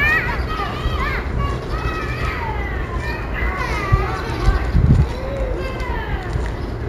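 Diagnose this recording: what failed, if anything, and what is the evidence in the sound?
Imaging from linear upsampling throughout, in sample-rate conversion: the top end is dulled, with faint mirrored images around 35 dB down between 8 and 16 kHz, consistent with 16 kHz audio linearly interpolated to 44.1 kHz.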